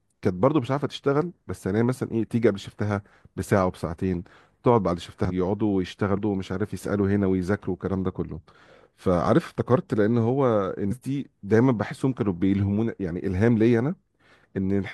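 Damaged data in the compressed stream hits three times: 5.25 to 5.31 s, 6.13 to 6.19 s, and 10.87 to 10.93 s. Corrupted bytes make the decoder misread frames and lose sync until it finds the next frame header, heard as brief chirps or blips in the speech.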